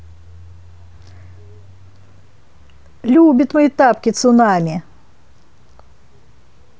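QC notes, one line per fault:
Nothing to log; the speech track shows no faults on listening.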